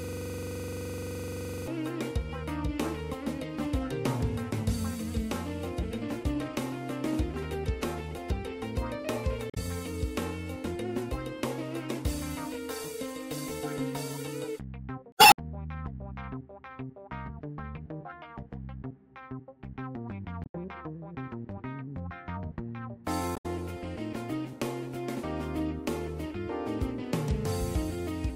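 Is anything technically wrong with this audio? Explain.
Yes, there are two kinds of fault.

From the very start to 1.68 s, the sound is a rough, rattling buzz. One 42.67 ms fragment repeats exactly, about 38 times, at roughly 23.4 Hz, and it is already under way when the clip begins. This is a system hang loop. The computer or driver stalled while the audio hardware kept replaying the same ring buffer. The loop length fits a 2048-sample buffer.

Four short glitches, heard as a chirp, squawk, click or short hole, break up the audio, at 9.47 to 9.58 s, 15.10 to 15.38 s, 20.41 to 20.55 s and 23.33 to 23.46 s. These come from damaged data in a compressed stream. Corrupted or missing bytes made the decoder misread those frames and lose sync. The garbled sound lasts while the decoder searches for the next valid frame header.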